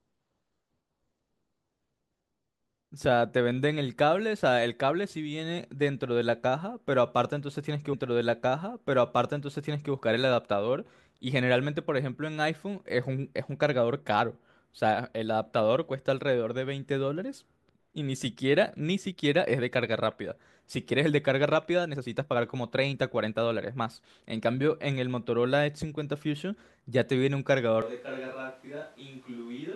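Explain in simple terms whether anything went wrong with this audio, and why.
Two things go wrong. At 7.92 s the speech jumps back with a small blip and about two seconds play a second time, running to 9.92 s. This is a stream segment repeated: the player fetched or queued the same chunk of the stream twice, so that piece of the talk is heard again before it moves on. The repeat adds roughly 2 s to the clip's running time.

From 27.82 s to the end, the voice suddenly turns hollow and roomy, with less low-end warmth. It becomes much quieter and there is more background noise from the room. This sudden change most likely comes from a switch to a distant microphone. The close microphone dropped out and the recording fell back on one further away, which picks up more of the room's echo and noise along with the voice.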